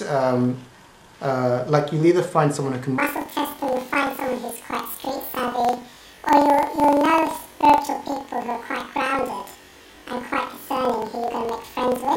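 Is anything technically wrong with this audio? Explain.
Yes. From 2.98 s to the end, the audio shows planar audio read as interleaved. Each block stores all left samples, then all right samples, but playback treats them as alternating pairs. So each block plays twice at double speed, left half then right half. The pace holds, but the pitch jumps an octave, 12 semitones up. A flutter at about 23.4 Hz rides on top. That fits blocks of 2048 samples, about 42.67 ms each.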